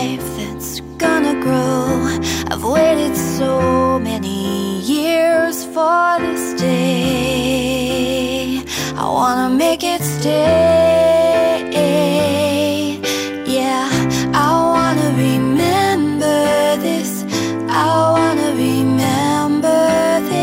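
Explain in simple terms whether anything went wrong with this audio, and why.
Nothing went wrong with this audio. No dropouts, glitches or other technical faults can be heard anywhere in it.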